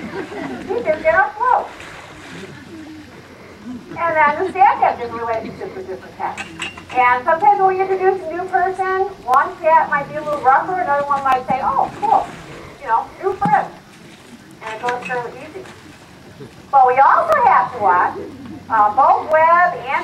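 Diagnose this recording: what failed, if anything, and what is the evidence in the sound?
Periodic USB or driver dropouts at the driver or buffer stage. From 9.34 to 19.32 s, a tick recurs every 1.0 s. Each one skips roughly 2 ms of audio.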